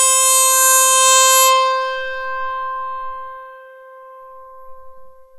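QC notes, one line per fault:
No faults heard anywhere in this music.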